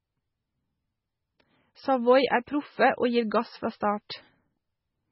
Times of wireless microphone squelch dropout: none

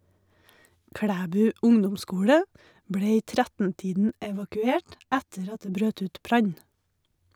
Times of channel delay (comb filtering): 4.09-5.73

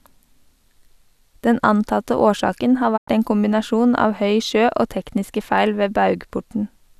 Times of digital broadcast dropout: 2.96-3.09

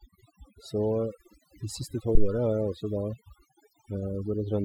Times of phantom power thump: 2.15-2.32

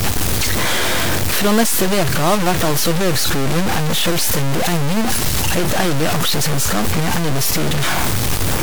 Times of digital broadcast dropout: none

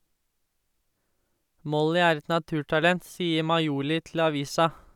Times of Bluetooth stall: none

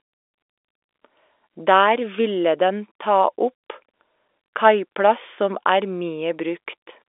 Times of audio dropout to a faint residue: none

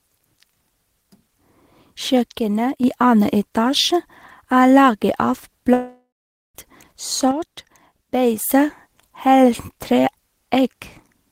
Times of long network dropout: 5.73-6.57

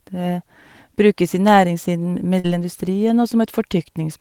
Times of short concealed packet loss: 2.39-2.46

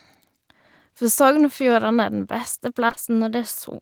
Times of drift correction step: 2.65-3.59

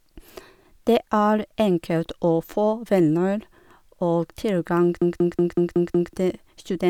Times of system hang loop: 5.02-6.13

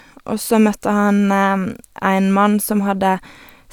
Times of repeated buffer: none

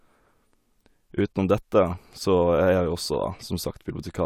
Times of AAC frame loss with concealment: none

